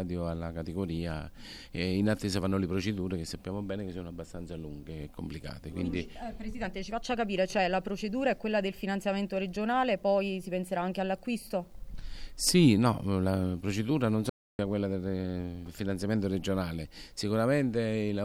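At 14.30 s the output cuts to silence mid-flow and stays silent until 14.59 s, a gap of about 295 ms, before the sound picks up again. This is a playback stall: the abrupt stop and clean resumption most likely come from the player running short of data or having its audio thread blocked, so nothing was delivered to the output until it recovered and continued.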